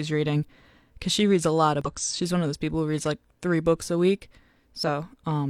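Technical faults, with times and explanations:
1.81–1.87 s and 4.83–4.86 s, damaged data in a compressed stream: a brief glitch cuts in right after "she reads a lot" and again after "three books a week", lasting about 50 ms and 30 ms. Here a stretch of the encoded speech arrived corrupted, so the decoder misread those frames, produced garbage in their place, lost its frame alignment and had to hunt for the next valid header before clean playback resumed.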